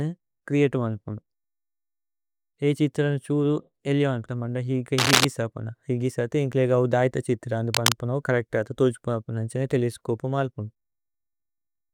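From 4.98 to 5.25 s a burst of cable scratch noise sits over the speech, a dense, ragged crackle a little louder than the voice. A second, shorter burst follows from 7.74 to 7.92 s, just after "ധര്ഥ ഛിത്രനേ", this time at roughly the speech level. Both are likely a worn cable or connector being moved, its contact resistance jumping rapidly and injecting uneven noise heard as brief scratching.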